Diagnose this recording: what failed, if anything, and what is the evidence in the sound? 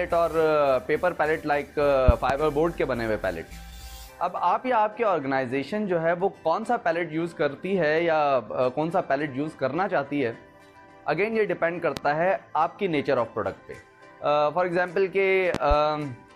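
Loud pops about 15 dB above the sound: double pops at 2.08–2.33 s and 15.55–15.74 s, single at 11.97–12.00 s. Likely analogue-wiring voltage transients, with the sound continuing underneath.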